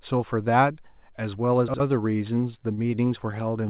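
At 1.68 s a brief jumbled flicker cuts into the speech, lasting until 1.8 s. This is chunks out of order: a 60 ms piece of audio played one chunk late, after the piece that should have followed it. Nothing is missing; the same sound is simply rearranged. Moving the one chunk leaves three abrupt joins where the waveform doesn't line up.

From 2.42 s to about 3.35 s the speech drags and hiccups, with eight short catches spread across the span. This is repeated stalls, a stutter. Each time, the next audio hadn't arrived in time and the jitter buffer ran dry, so the receiver stretched the last sound to cover the wait. Together these fills come to 88 ms, about 9% of the stretch, and the longest is 29 ms. Nothing was dropped, which is why the speech sounds slowed and halting rather than broken up.

All of this passed through a call path whose narrowband coding, likely G.711 A-law at 64 kbps, leaves nothing above 4 kHz.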